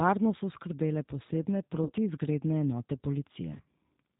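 From the start, the speech passes through a G.729 codec. This low-rate coder, here consistent with G.729A at 8 kbit/s, discards the original waveform. It rebuilds each 10 ms frame from a vocal tract filter, a pitch predictor and a handful of pulses. The result is plainly audible throughout. Nothing above 4 kHz remains, so the speech sounds narrow and muffled, with a rough, slightly synthetic edge.

At 1.84 to 1.91 s, VoIP packet loss concealed by the speech codec sets in. About 50 ms of packets went missing. The decoder filled the gap by extending its last pitch and filter settings at falling gain, so the speech smears into a brief buzzy tone or coloured noise that fades. At 3.54 to 3.66 s the same concealment returns. Here 80 ms of audio was lost in bursts spread over 120 ms, the longest lasting 40 ms. The repeated extrapolation gives a weakened, distorted stretch before the speech recovers.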